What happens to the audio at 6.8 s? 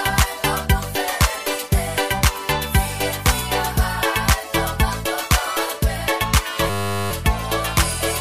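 A system hang loop runs from 6.7 to 7.11 s: a frozen driver leaves the hardware replaying one 10 ms buffer, heard as a steady 100 Hz buzz.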